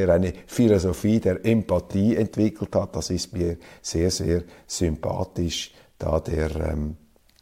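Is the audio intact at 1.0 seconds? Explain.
Yes, at 1.0 seconds the speech plays through intact, with no audible dropout, click, distortion or other fault at that moment.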